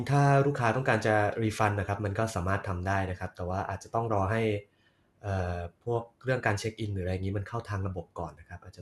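A speech recording that has most likely been through MP2 compression at a low bitrate, with the damage plainly audible from start to finish; the character points to something around 80 kbps. Starved of bits, the encoder shuts off whole upper sub-bands, leaving nothing above about 12.2 kHz and a dull top end. The bands that survive are coarsely quantised and flicker in and out, giving the voice a gurgling, granular roughness.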